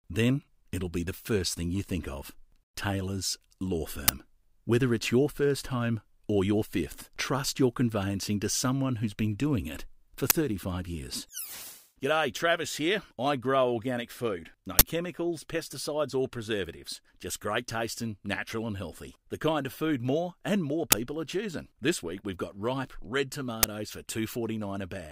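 Short, very loud bursts of digital noise with a harsh edge at 4.08, 10.3, 14.79 to 14.81, 20.92 and 23.63 s: an uninitialised buffer, where leftover memory was played as samples for about 10 to 20 ms each time.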